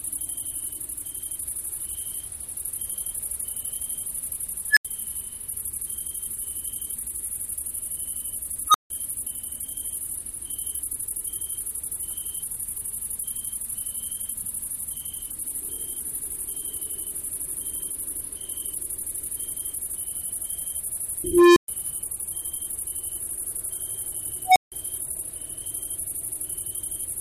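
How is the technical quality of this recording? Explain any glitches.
The quality is compromised by four bursts from an unstable filter, at 4.70 s, 8.68 s, 21.24 s and 24.46 s. A recursive filter with bad coefficients feeds its output back with rising gain, so a tone balloons to clipping and then overflows into silence until the filter resets. The first two events are squeals near 1.5 kHz that build over about 63 ms and 62 ms and then drop out for 80 ms and 160 ms. At 21.24 s a lower tone near 400 Hz swells over 321 ms before a 120 ms gap. At 24.46 s a tone near 700 Hz builds over 103 ms and is followed by 160 ms of silence.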